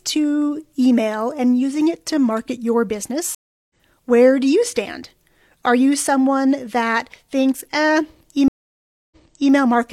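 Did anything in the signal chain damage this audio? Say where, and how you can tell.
Yes. Two stream reconnects at the network stage: dead silences at 3.35–3.75 s (351 ms) and 8.48–9.53 s (631 ms) show as blank columns on a spectrogram. The first resumes about a third of a second later, skipping material. The second resumes 418 ms earlier, repeating speech.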